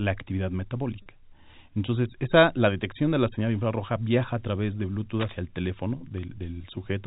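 At 1.02 s a short, slightly held buzz replaces the speech for about 40 ms, until 1.06 s. This is packet loss with pitch repetition: the receiver bridged the missing audio, which fits two lost 20 ms packets, by repeating the last pitch period.

From 5.15 to 5.35 s, between "viaja a través de" and "el teléfono", dense, uneven scratching runs over the speech at a level only a little below it. This is cable scratch noise, likely from a worn cable, connector or control whose contact resistance jumped as it moved. The line is carried by narrowband G.711 telephone coding.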